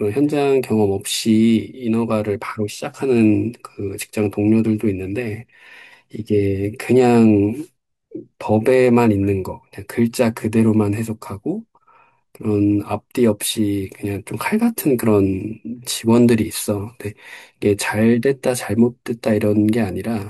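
No technical fault can be heard anywhere in this speech recording, and the signal holds together throughout.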